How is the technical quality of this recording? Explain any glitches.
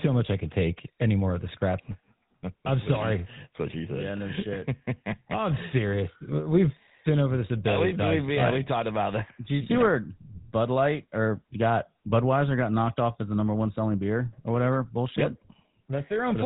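The recording is clearly degraded by GSM full-rate codec damage throughout. A vocal-tract model excited by sparse regular pulses leaves a buzzy, gravelly roughness, fitting 13 kbps. A spectrogram shows nothing above 3.8 kHz.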